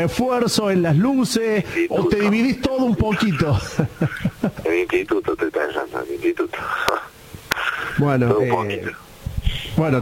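At 2.28 s a single sharp click is heard, most likely from dropped samples: a fraction of a millisecond of the stream went missing, so the waveform jumps abruptly to a later value. On a spectrogram it appears as one thin vertical line spanning all frequencies.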